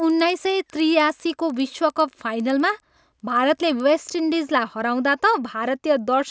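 From 0.0 to 3.9 s, a resampler restarted on every block, likely converting 44.1 kHz to 16 kHz in 100 ms chunks, leaving a steady 10 Hz tick under the speech.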